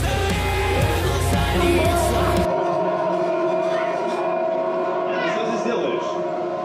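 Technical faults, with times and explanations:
No technical faults detected.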